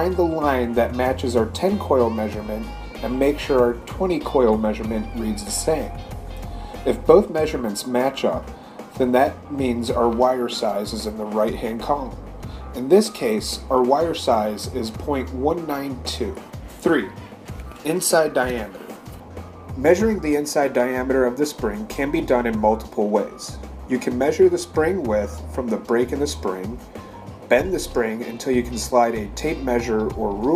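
No technical faults can be heard anywhere in the recording; the signal stays steady and intact throughout.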